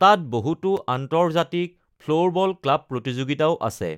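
Speech, with one short block of digital silence at about 0.77 s. For roughly 5 ms the sound cuts out and then comes back, with no fade on either side, and the whole thing reads as a single tick rather than an audible hole. A dropout that short and abrupt points to the output buffer not getting filled in time for that one block.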